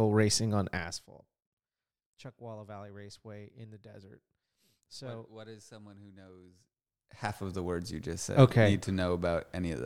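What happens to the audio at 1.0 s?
Zipper noise runs from 0.68 to 1.12 s, just after "racing on", so 1.0 s falls inside it. The level drops by roughly 20 dB, but in hard steps of about 3 dB instead of a smooth ramp, arriving at around fifteen steps per second. Each jump in gain puts a small discontinuity into the waveform, and those clicks string together into a rapid ticking, zipping texture that rides on the speech while the level falls.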